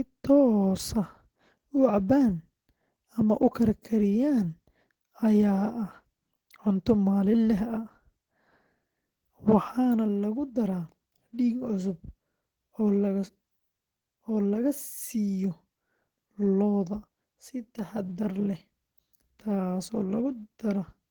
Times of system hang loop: none

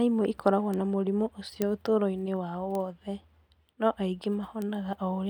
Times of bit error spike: 0.74, 1.62, 2.75, 4.62

